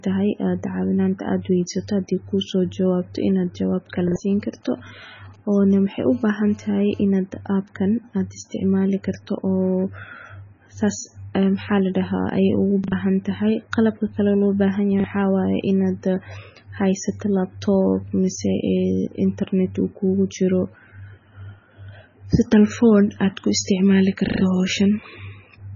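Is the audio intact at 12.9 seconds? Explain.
No. From 12.84 to 12.92 s there is a repeated buffer. New audio did not reach the output in time, so the device replayed the last block it held. That block is about 40 ms long, and it plays two extra times. Each restart makes a hard join. The result is a quick stutter. About 70 ms of the real speech is skipped over.

The same moment also carries heavy damage, likely from MP3 compression at a very low bitrate near 16 kbps. Nothing is heard above 7 kHz, so the speech sounds dull. Weak frequency detail flickers on and off from frame to frame. That gives a watery, swirling texture. S sounds turn metallic and chirpy, and sharp onsets blur.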